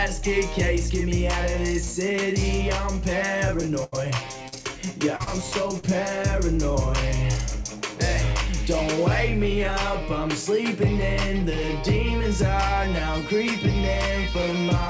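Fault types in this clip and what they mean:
Burst of packet loss: Between 3.84 and 3.95 s, about 80 ms of the stream failed to arrive in time to be played. The receiver filled the gap by extending the last sound it had and letting it fade over roughly 80 ms, so there is a brief held, decaying tail rather than silence. The audio then picks up further along, and the stretch in between is simply gone.
Short concealed packet loss: Four smaller dropouts, at 4.48, 5.16, 5.24 and 5.79 s, each lost about 40 ms of audio. The decoder patched every hole with 30 to 42 ms of synthesised continuation before blending back into the real signal. Each one sounds like a quick smear or wobble, and the two at 5.16 and 5.24 s fall almost back to back. The band-limited call codec passes nothing above 8 kHz.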